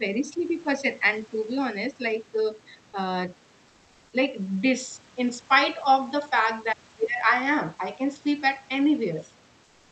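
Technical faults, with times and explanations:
0.0–1.48 s, speech suppressed in double talk: the speech dips in pieces, around 0.4 s in all, with the deepest drop roughly 5 dB. This is likely an echo canceller that heard both sides at once and turned the near talker down along with the echo.
9.64–9.91 s, comfort noise in place of the background: for the final 0.27 s the room noise turns into a steady, featureless hiss about 2 dB quieter. This is likely discontinuous transmission, with the sender pausing and the receiver filling the gap with synthetic noise.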